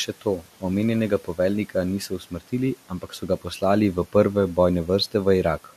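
At 0.08 to 0.63 s, 1.2 to 1.39 s, 2.1 to 2.53 s and 2.89 to 3.46 s, speech is cut by the noise suppressor, dipping by about 12, 10, 9 and 11 dB. It mistook quiet consonants and tails for the room noise sitting about 23 dB below. Only brief slivers, about 0.1 to 0.15 s each time, sound swallowed. Unlike a dropout, the sound never vanishes outright, and the background dips along with it.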